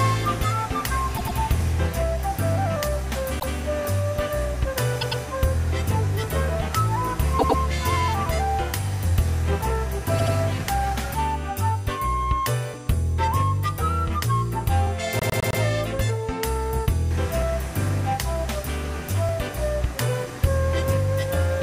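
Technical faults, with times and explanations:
1.16 to 15.61 s, repeated frames: compressed blocks of 78 to 157 ms were sent more than once, so the decoder replays them, one to four extra times, at 1.16, 3.38, 5.00, 7.38, 10.18 and 15.19 s. Each is heard as a stutter, and each lengthens the audio by the replayed time.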